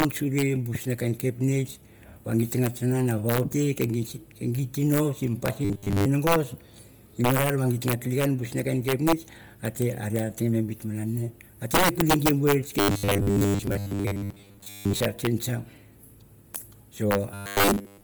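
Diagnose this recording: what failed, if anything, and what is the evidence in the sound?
Throughout the speech, loud peaks break into violent cracks, far harsher than ordinary clipping. This is integer overflow at a gain or sample-format conversion stage. The signal was driven about 7 dB past full scale, and instead of being limited, the samples that exceeded the largest integer wrapped to the opposite sign. Each wrap throws the waveform across the whole range. Only a small fraction of samples, under one percent, are affected, so the damage appears as isolated snaps on the loudest moments.

The whole clip also has a breathy, grainy edge, with the upper spectrum sounding hollow and noise-filled rather than detailed. This points to a codec stage, likely Bluetooth LC3 compression. Its transform coding at a low bitrate, consistent with around 32 kbps in 10 ms frames, discards much of the high-band content and substitutes shaped noise. 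The damage here is heavy, which gives the speech its coarse, hissy texture.

In three stretches the speech turns into a rigid, metallic buzz fixed at 100 Hz while still loosely tracking the syllables: 5.65 to 6.06 s, 12.80 to 15.00 s, and 17.32 s to the end. This is robotic sound from repeated short buffers, likely at the driver or buffer stage. New audio arrived too slowly, so roughly 70 percent of the time was filled by replaying the last block. A 100 Hz buzz fits a 10 ms buffer looping while real audio was skipped.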